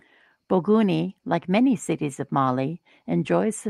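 No technical faults turn up anywhere in this speech recording.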